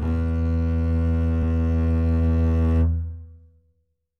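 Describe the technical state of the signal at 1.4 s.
A brief glitch cuts into the music at 1.42 s: damaged data in the compressed stream, where corrupted frames make the decoder lose sync and search for the next frame header.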